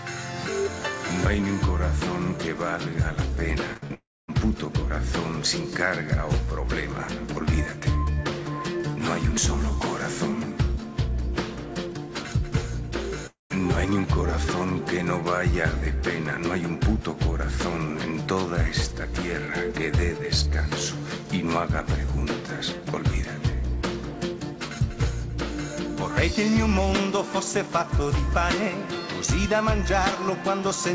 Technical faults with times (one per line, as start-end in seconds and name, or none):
3.74-3.92 short concealed packet loss
3.77-3.84 burst of packet loss
3.94-4.34 long network dropout
13.27-13.52 long network dropout